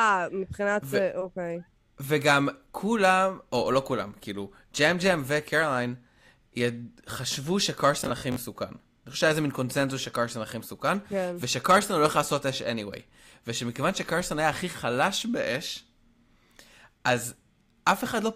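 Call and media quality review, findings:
Robotic sound from repeated short buffers, 8.00 to 8.40 s. Speech turns into a rigid metallic buzz at 50 Hz. Likely audio underrun. The 50 Hz fits a 20 ms segment replayed while real audio is skipped. About two fifths of the stretch is repeats.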